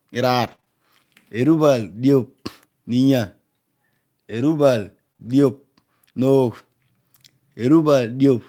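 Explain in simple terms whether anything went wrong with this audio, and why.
Choppy, robotic sound with little pieces missing runs from 0.43 to 0.68 s. This is repeated packet loss (robotic sound): three bits of the call went missing one after another, the longest about 27 ms, and the receiver patched roughly 70 ms by stretching the last sound.

At 5.13 and again at 5.17 s there are two quick smears, each lasting a few hundredths of a second. Both are short concealed packet loss: about 20 ms of audio arrived too late each time, so the receiver continued the previous sound to cover the hole and then blended back in.

Right after that, from 5.21 to 5.27 s, the sound turns briefly rougher and noisier, but nothing drops out. That is a lost packet rebuilt from error correction. The pattern fits two lost pieces, each replaced by a cruder backup copy carried in the next piece, which covers 40 ms.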